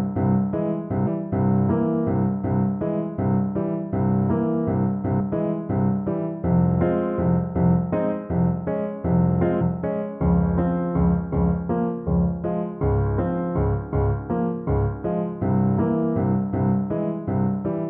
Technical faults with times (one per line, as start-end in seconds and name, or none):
1.02-1.08 damaged data in a compressed stream
5.16-5.21 damaged data in a compressed stream
9.57-9.62 damaged data in a compressed stream